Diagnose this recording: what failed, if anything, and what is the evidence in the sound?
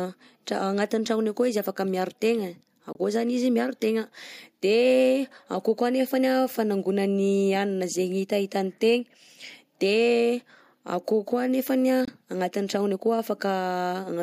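Silent gaps at 2.93–2.97 s and 12.05–12.10 s show as flat waveform and blank spectrogram stripes: likely a Bluetooth dropout, one lost wireless frame each.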